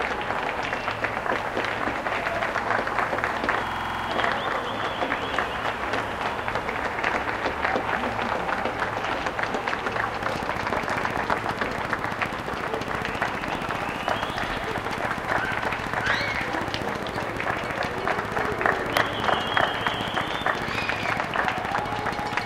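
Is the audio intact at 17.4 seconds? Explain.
No, a train of clicks runs from 10.23 s to the end, regular ticking at 14.7 per second, peaking roughly 10 dB above the sound, likely from nearby interference.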